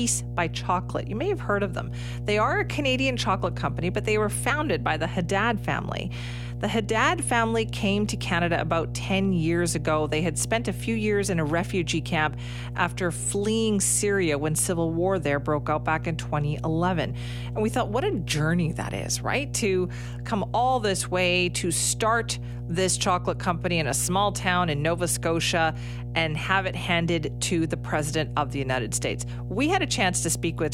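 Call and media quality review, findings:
Mains hum, entire clip: ground loop or nearby transformer coupling the 60 Hz power line into the capture path. Steady low 60 Hz tone with low harmonics, loud, sitting only a little below the speech level.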